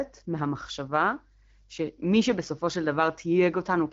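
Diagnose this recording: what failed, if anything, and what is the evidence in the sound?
Nothing in this speech recording has failed, and no stage from capture to playback shows a fault. It has passed through the AMR wideband (HD Voice) codec at 12.65 kbit/s, which fits the clear, lightly coded sound, with the band above 6.4 kHz carried as shaped noise up to 7 kHz.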